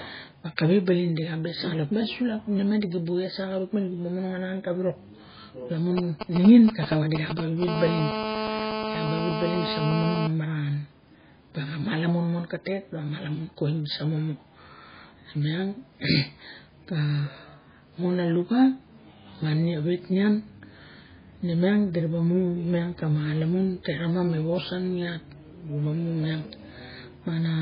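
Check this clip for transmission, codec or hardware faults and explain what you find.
Three faults here: codec damage running through the whole speech clip, plus a nearby 2G phone interfering from about 6 to 10 seconds.

MP3 compression, likely, throughout: the speech sounds watery and swirly, with smeared attacks and nothing above 5 kHz. That heavy damage fits a starved bitrate around 16 kbps, where the encoder drops weak frequency lines.

GSM signalling bursts, 5.98 to 7.64 s: a galloping dit-dit-dit of short 217 Hz buzzes, roughly 5 dB below the speech. A phone was sending short bursts of radio pulses, and the audio circuit rectified them.

GSM phone buzz, 7.68 to 10.27 s: once the phone is in a call, it becomes a hard, raspy, nearly steady 217 Hz buzz with lots of harmonics, about 5 dB below the speech, from the rectified burst transmission.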